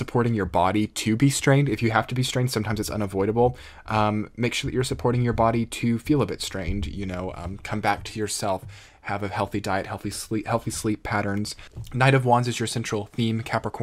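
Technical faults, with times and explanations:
No technical faults detected anywhere in the clip.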